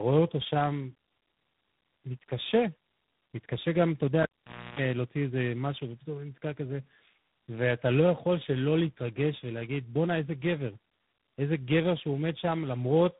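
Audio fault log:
throughout: tandem speech coding. The speech sounds decoded and re-encoded at several link borders, which fits about three speech coders in a row. Each one compounds the last one's damage, so the speech is rougher, more muffled and warblier than any single codec would leave it. Nothing above 3.8 kHz remains.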